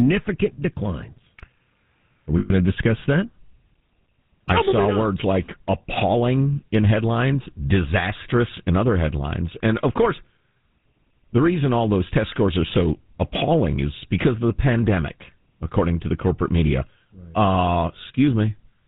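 The GSM full-rate codec affects the whole clip, and its damage is plainly audible, consistent with the 13 kbps full-rate coder. It rebuilds the voice by driving a model of the vocal tract with a coarse train of evenly spaced pulses, and it keeps only a third of the excitation's samples. Nothing above 4 kHz gets through, so the speech sounds muffled at the top. It also has a buzzy, gravelly grain, most noticeable on higher-pitched sounds.

Lost GSM frames interrupt the speech from 2.38 to 2.51 s, just before "to discuss that". For about 120 ms, a span that points to six consecutive 20 ms frames going missing, the decoder had no fresh data. It filled the gap by reusing the parameters from the last good frame. That stretch therefore carries a rough, metallic ring in place of real speech. The ring continues until proper decoding resumes.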